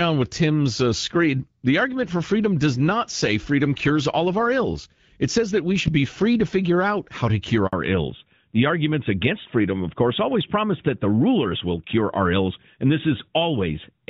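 At 7.67 s, just after "out how to cure", the speech cuts out for 60 ms in a handover gap: the call was passed between networks and no speech frames arrived while the link switched, so the sound fades within a few tens of milliseconds into flat silence and anything said in that window is simply missing. Unlike a lost packet covered by concealment, there is no smeared or repeated sound bridging the hole, just a clean drop to nothing until the new link starts.

From 7.73 s to the end, the call falls back to narrowband. Before the gap, the HD Voice path sounds clear with only light coding roughness, which fits AMR-WB at around 12.65 kbit/s. Afterwards nothing remains above 4 kHz, consistent with AMR-NB at 12.2 kbit/s. The speech turns duller and boxier, and the sibilants lose their crispness. What sets this apart from a low-pass filter or a bitrate dip within the same codec is that the band edge drops abruptly at the handover and stays there, rather than the sound growing raspier at an unchanged bandwidth.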